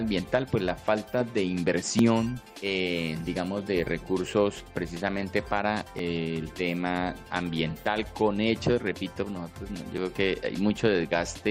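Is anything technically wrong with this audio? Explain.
Yes: overlap between stream segments causes tiny skips at 1.99, 5.99 and 9.98 s. The regular 4-second spacing matches segment boundaries, where trimmed audio makes the waveform jump, giving skips rather than dropout silences.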